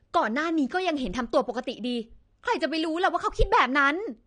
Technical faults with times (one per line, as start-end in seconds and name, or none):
0.00-4.26 AAC compression